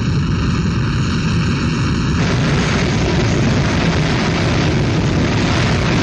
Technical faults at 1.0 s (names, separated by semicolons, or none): channel delay (comb filtering)